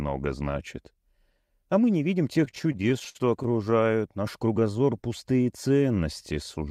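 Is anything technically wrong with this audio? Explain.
Yes, two. From 2.33 to 3.73 s, just after "мы не видим", there are repeated stalls (stutter): packets arrived late, so the jitter buffer ran dry about twenty times and the receiver held the last sound, for up to 57 ms. The result is choppy hiccups with no lost audio.

From 4.60 to 5.79 s, a jitter buffer slow-down repeats pitch periods to rebuild reserve, adding 134 ms. The sound plays at 89% speed, drawn out at unchanged pitch rather than stuttering.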